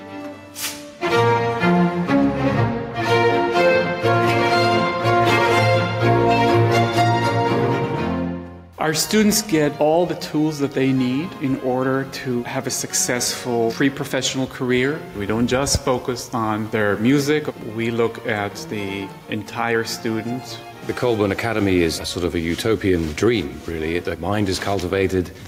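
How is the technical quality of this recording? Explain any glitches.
The recording has one ongoing problem: gain pumping, audible from start to finish. The level swings by about 5 dB, pulled down whenever something loud arrives. That likely comes from input gain set too high, with a fast limiter yanking the level down, so the dynamics sound squashed and breathing.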